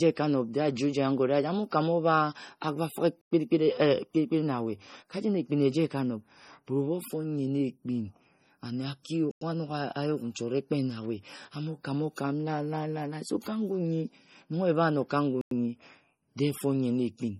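Throughout, the speech sounds watery and swirly, with metallic chirps on the s sounds, smeared consonant onsets, and nothing above 16.5 kHz. That points to MP3 compression at a low bitrate, likely around 32 kbps, cutting the treble and dropping weak frequency components.

Short 100 ms holes break the sound at 3.21 s, at 9.31 s just after "ane aki", and at 15.41 s, 6.1 s apart. This is a gap between chunks: silence inserted at each join between 6-second pieces, interrupting the sound without losing any of it.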